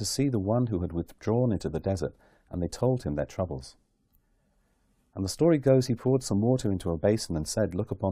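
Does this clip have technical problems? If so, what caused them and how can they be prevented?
No, there are no technical problems to fix here.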